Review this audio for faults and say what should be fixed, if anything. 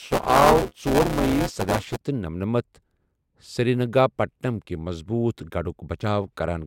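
From 0 to about 1.97 s there's buffer tearing, a robotic buzz near 188 Hz that fits a 256-sample buffer. Writer and hardware have slipped, so about a fifth of each period replays audio around 10 ms stale. Resync the write pointer after any xrun.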